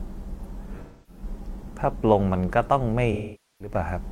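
AAC frame loss with concealment strikes at 0.82–1.23 s and 3.12–3.75 s: the decoder fills the gaps from the last good spectrum. The result is a smeared, noisy patch, and the spectrogram shows a blurred, flattened band where detail vanishes.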